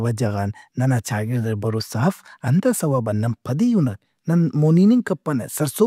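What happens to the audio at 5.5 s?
Nothing goes wrong at 5.5 s; the speech continues there without any dropout, click, distortion or other audible fault.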